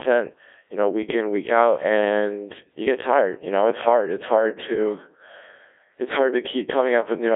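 Throughout, a Codec 2 vocoder resynthesises the speech from pitch and envelope, leaving it heavily robotic and buzzy, confined to 300 Hz–3.6 kHz, consistent with 1.6 kbit/s.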